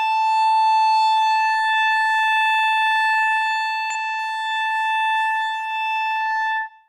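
Damaged data in a compressed stream appears at 3.90 s in this music, a short glitch of about 10 ms. The corrupted frames there cannot be decoded properly, so the decoder loses sync and hunts for the next valid frame header, producing a brief chirp or blip.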